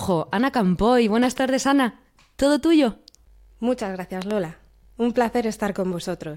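A speech recording carrying two loud pops, each a doubled sharp thump about 10 dB above the voice, at 1.24 to 1.40 s and 4.22 to 4.33 s, likely from an electrical glitch; waveforms show tall paired spikes, spectrograms thin full-height vertical lines.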